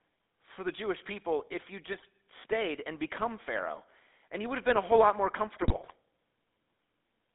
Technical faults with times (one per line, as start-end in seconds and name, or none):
0.00-7.35 GSM full-rate codec
1.92-2.06 GSM bit errors
5.55-5.93 GSM bit errors